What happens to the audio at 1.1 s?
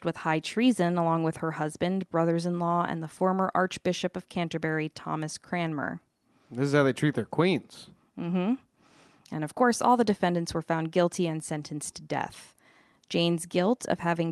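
At 1.1 s the speech comes through intact, with nothing more than the ordinary coding character of the Opus call path it travels over.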